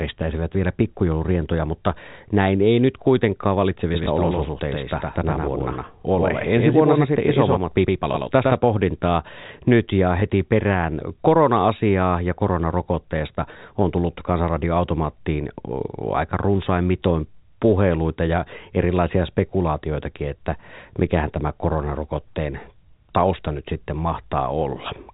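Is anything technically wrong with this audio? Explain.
Yes. From 3.93 s to 8.57 s, just after "näin ei nyt kuitenkaan" and ending before "pohdintaa nyt ja", there is a doubled audio track. A second full-band copy of the speech runs roughly a tenth of a second behind the original, about 5 dB quieter. It most likely comes from the same signal being picked up again through a slower path. It differs from a room echo or reverb because the copy does not decay, has no room colour, and switches on and off abruptly.

There are two instances of packet loss with the last packet repeated, at 4.04 s and at 10.2 s, the second just after "pohdintaa nyt ja". Each time one 20 ms stretch went missing, and the receiver filled the gap by replaying the preceding packet. Each one comes across as a small blip. A plain dropout would leave silence instead. Because each loss is a single packet, there is no sustained 50 Hz buzz. 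The narrow telephone band from the G.711 coding is audible throughout.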